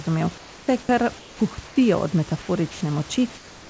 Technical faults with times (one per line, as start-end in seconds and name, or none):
0.38-0.68 comfort noise in place of the background
1.19-1.40 comfort noise in place of the background
1.67-1.76 comfort noise in place of the background
2.72-2.81 sound dropped by the voice detector
3.35-3.69 comfort noise in place of the background